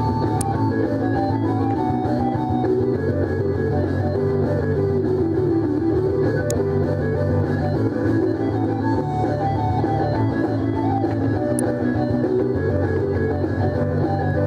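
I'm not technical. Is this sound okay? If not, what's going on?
No, there are sharp snaps at 0.41, 6.50 and 11.59 seconds, an electrical switching spike, likely from a nearby switch or motor sparking into the audio line.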